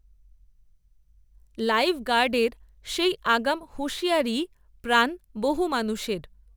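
Throughout the speech, sample clock jitter of a few microseconds adds a roughness around 30 dB down, which swells on loud, bright syllables and vanishes in pauses, unlike steady hiss.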